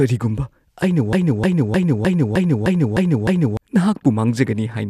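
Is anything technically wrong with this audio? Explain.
Yes. From 1.13 to 3.57 s the speech falls into a broken-record loop: a 306 ms fragment plays eight times back to back. The likely cause is a stalled player or stream resending its last fragment, so the intended speech is lost. Unlike an echo, the repeats are identical and never fade or overlap.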